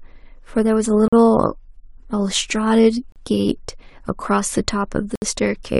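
At 1.08, 3.12 and 5.16 s the speech drops into hard-edged silences of 45, 36 and 65 ms, a gap between stream segments every 2.0 s. Segment timestamps leave small holes that playback pads with silence, so timing stretches while nothing is lost.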